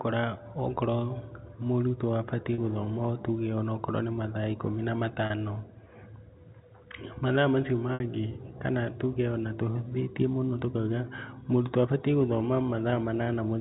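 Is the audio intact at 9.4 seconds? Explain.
Yes, at 9.4 seconds the speech comes through intact, carried over ordinary G.711 telephone coding with nothing out of place at that moment.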